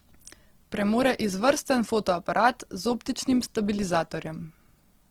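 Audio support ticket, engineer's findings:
Grainy, rough speech throughout, noisy texture rather than swirling, few spectral holes. Likely Opus compression in CELT music mode: band energy kept, starved bands filled with folded or noise content. Fits roughly 16 kbps, full bandwidth retained.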